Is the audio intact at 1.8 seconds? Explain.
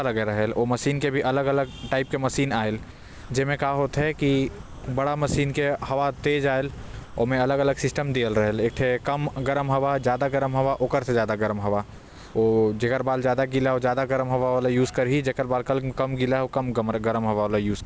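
Yes, the speech is intact at 1.8 s, with no dropout, glitch or distortion at that moment.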